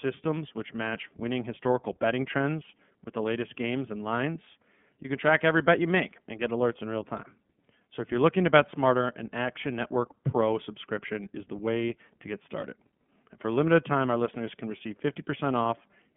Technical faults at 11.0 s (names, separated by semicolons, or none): iLBC codec